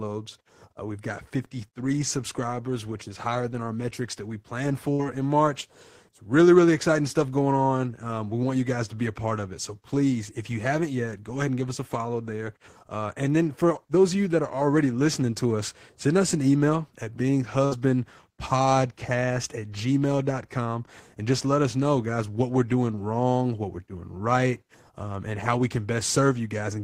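At 4.93 to 5.02 s and again at 17.65 to 17.74 s, a burst of packet loss cuts the speech. Each time, about 60 ms never arrived. The receiver stretched the last sound, fading it over roughly 60 ms. It comes out as a brief buzz or hiss, then speech resumes slightly ahead.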